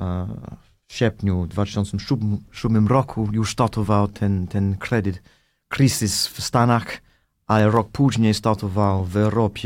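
CD scratch ticks run from 6.90 to 7.94 s: seven short ticks in just over a second, a steady rate of roughly six or seven a second, each a couple of milliseconds long at most. A scratch or blemish on the disc wipes out more data than error correction can restore, once per revolution, so the player interpolates or mutes those samples. The result is a regular patter of clicks or tiny gaps laid over the speech.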